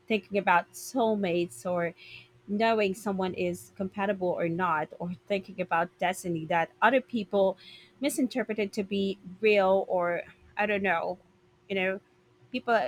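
Sample clock jitter runs throughout. Samples land about a microsecond off at random. A faint hiss, roughly 40 dB down, rides on louder, brighter speech.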